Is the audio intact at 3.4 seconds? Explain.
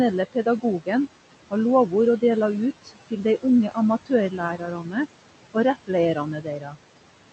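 No. Just after "har lovord å dela", from 2.84 to 3.44 s, parts of the speech sound swallowed and faint, dipping by about 17 dB over roughly 150 ms in all. This is speech cut by the noise suppressor, which mistook those quieter speech parts for background and turned them down.

The room noise sinks between the words and rises under them. These are noise suppressor artifacts: the suppressor pulls the noise down by about 18 dB, band by band and frame by frame.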